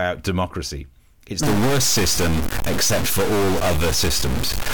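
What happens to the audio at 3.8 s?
A stuck bit runs from 1.43 s to the end of the clip, so 3.8 s falls well inside it. The speech takes on a harsh, buzzy distortion, and the gaps between sounds fill with noise rather than falling silent. The likely cause is one bit of the data held fixed, which shifts about half the sample values by that bit's weight. Here that bit is fairly high, a step of roughly -20 dBFS, so the added noise in the pauses is louder than a low bit would give.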